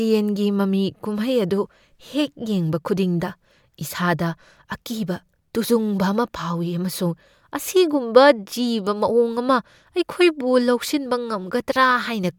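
No technical faults are audible anywhere in the speech recording.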